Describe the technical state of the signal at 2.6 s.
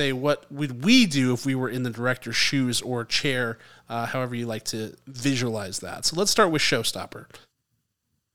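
At 2.6 s the speech signal is intact, with no audible technical fault at that moment.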